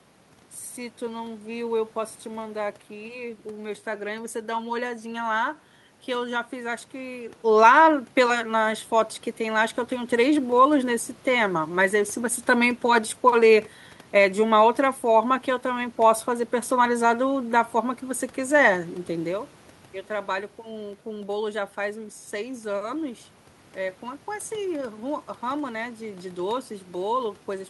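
No technical fault can be heard in the signal: the background noise belongs to the room itself, and the changes in level at around 7 and 19 seconds come from the talker moving relative to the microphone, not from the system.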